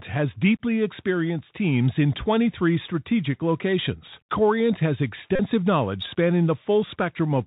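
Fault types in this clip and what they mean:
Bluetooth CVSD headset codec: one-bit delta modulation cuts everything above 4 kHz, leaving scratchy sibilants, overloaded loud high sounds, and granular hiss beneath the speech throughout.
Bluetooth headset packet repeated: from 5.36 to 5.40 s, lost packets were replaced by replaying old data every 3.75 ms, producing a 37.5 ms buzz near 267 Hz.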